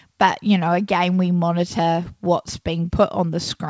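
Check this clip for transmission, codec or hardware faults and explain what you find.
Nothing faulty can be heard in this speech recording.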